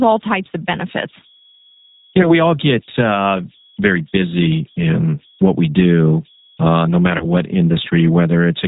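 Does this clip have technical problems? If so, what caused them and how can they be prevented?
Yes. Three kinds of fault are audible.

Converter idle tones run through the whole clip. A faint whistle sits near 3 kHz, about 33 dB below the speech. It is clearest in pauses. A delta-sigma converter without dither has fallen into repeating bit patterns on a small input. Those patterns form a steady tone set by the input's offset. Quiet passages also pick up a grainy texture. To prevent it, use a converter with dither enabled, or add dither before the converter.

The G.729 codec damage is plainly audible from start to finish. The codec runs at 8 kbit/s. It rebuilds speech from a vocal tract filter, a pitch predictor and a few pulses per frame. Nothing above 4 kHz survives, so the sound is dull. The speech also has a rough, slightly synthetic edge. To prevent it, use a wideband or higher-bitrate codec such as Opus or G.722 where the network allows.

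VoIP packet loss concealed by the speech codec occurs twice. The first is from 2.22 to 2.35 s, just before "all get uh very". The second is from 7.18 to 7.26 s, just after "we do uh no". Each gap is about 20 ms, which fits a single lost packet. The decoder extended its last pitch and filter and faded the gain, so the sound turns into a buzzy tone or coloured noise and weakens. The damage outlasts the gap because each frame builds on the previous one. To prevent it, improve network reliability, or add jitter buffering and forward error correction.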